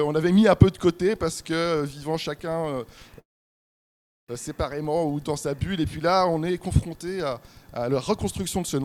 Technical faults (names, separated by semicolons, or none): call audio freeze